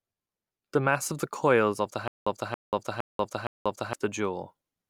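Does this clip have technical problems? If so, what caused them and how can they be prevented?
Yes. From 2.08 to 3.93 s there is a stutter with silent gaps, likely from the playback stream stalling and replaying its last fragment at each retry. A 275 ms burst of speech repeats four times, each followed by 188 ms of digital silence, every 464 ms, and the speech that should have played there is lost. Larger playback buffering and a stream that fills gaps with concealment instead of looping would prevent it.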